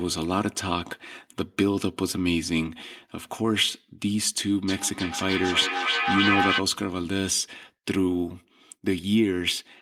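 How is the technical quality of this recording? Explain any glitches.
One fault stands out. From 4.68 to 6.68 s, feedback echo between two devices: a second device replays this microphone, each word returning roughly every third of a second, as loud as the speech, unlike fading room reverb.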